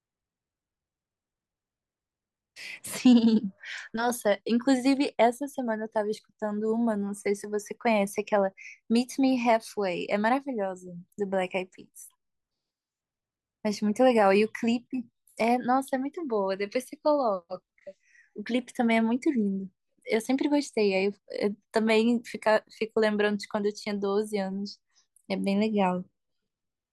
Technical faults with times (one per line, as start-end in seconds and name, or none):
none